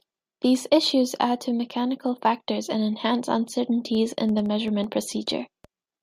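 Speech with a train of clicks from 3.95 to 5.66 s: around seven same-shaped pops at about 4.1 per second, unevenly spaced, roughly as loud as the voice and likely from interference or a faulty connection or power supply. The repetition marks it apart from a single isolated click.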